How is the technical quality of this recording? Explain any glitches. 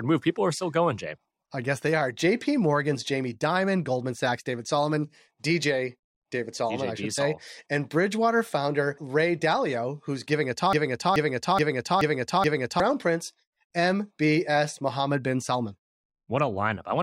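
One clear glitch mars the speech, a broken-record loop from 10.73 s to 12.8 s. The playback or streaming chain likely stalled and kept resending the last fragment it held, a 427 ms slice of audio repeated five times back to back. It sounds like a stuck skipping record: the same short chunk stutters identically over and over, and whatever should have been heard in those two seconds is missing when the sound resumes.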